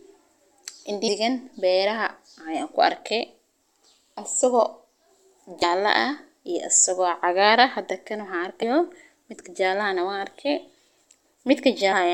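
Short blips at 1.07, 5.62, 8.62 and 11.91 to 11.94 s are damaged data in the compressed stream: corrupt frames make the decoder lose sync and cause a brief glitch in the speech.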